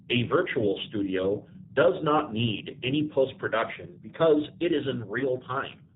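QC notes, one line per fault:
Throughout: G.729 codec. The sound is clearly rough and slightly synthetic, with nothing above 4 kHz. That fits an 8 kbit/s G.729A-style coder rebuilding each frame from a vocal tract filter, pitch predictor and a handful of pulses, so the fine detail just isn't there.
5.19 to 5.26 s: VoIP packet loss concealed by the speech codec. Right after "production because it is", the decoder papers over a roughly 20 ms gap, consistent with two lost 10 ms frames, by stretching its last pitch and filter into a fading buzzy or noisy smear. It stays weak for a few tens of milliseconds because each new frame builds on that damaged state.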